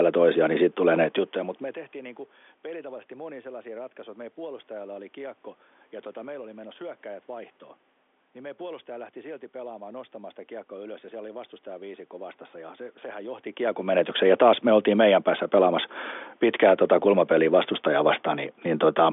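Nothing is technically wrong with this speech recording. It comes over a G.711 telephone line limited to about 250 Hz to 3.5 kHz, with some room noise underneath, and the voice level shifts near 1 s and again near 13 s as the talker moves relative to the microphone.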